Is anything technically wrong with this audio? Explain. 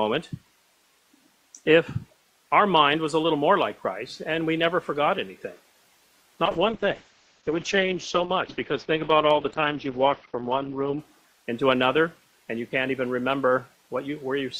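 Yes. From 6.47 to 11.05 s there is a call bitrate drop: the encoder was forced to spend far fewer bits, which fits a fall from about 48 to 8 kbps. It codes coarsely and the top end narrows from 20 kHz to about 6 kHz, so the sound turns muffled and rough. Unlike packet loss, there are no gaps or clicks, just a steady degradation until it recovers.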